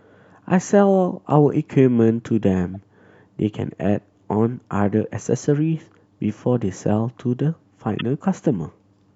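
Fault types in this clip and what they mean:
Corrupt frame decoded: damaged compressed frames were still decoded, so misread gains or codes put energy at the wrong frequencies. In this speech it is heard as a chirp, squeak, blip or burst of noise at 2.74 s and a much louder one from 7.99 to 8.01 s, each spanning a couple of frames.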